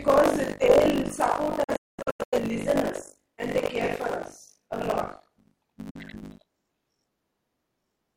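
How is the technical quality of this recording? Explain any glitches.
Technical quality is poor: a buzzing tear runs through the whole speech recording, and the signal drops out twice.

Buffer tearing is present from start to finish. The software filling the playback ring buffer and the hardware reading it have drifted out of step, so their positions cross within every period. Around 40 percent of each buffer still holds audio from roughly 70 ms earlier, with abrupt joins on either side. The result is a rough, robotic buzz at 50 Hz, which fits a 20 ms buffer period. It rides on the speech and disappears in the gaps between sounds.

The first digital broadcast dropout runs from 1.64 s to 2.38 s. The receiver lost valid frames and muted until clean data returned, fading out over 8 ms each time. Rather than one gap, the sound breaks into several short holes spread across 683 ms, totalling about 469 ms of missing audio. 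The longest single silence is 213 ms. What was broadcast during those holes is simply gone.

A second, brief digital broadcast dropout falls at 5.90 s to 5.98 s. The same mute-on-error behaviour cuts out a single 43 ms stretch, again with a quick 8 ms fade. It sounds like a short hiccup in the speech, and the audio picks up again just after it.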